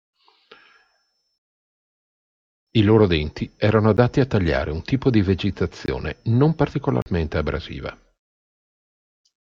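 Speech, interrupted three times by a block of digital silence. At 3.97 s a gap of about 13 ms is heard as a tick. At 5.86 s, 20 ms of silence makes a pop. From 7.02 to 7.06 s, 40 ms becomes a short hole. In each case a run of zeros was played. The sound drops to dead silence and returns with no fade.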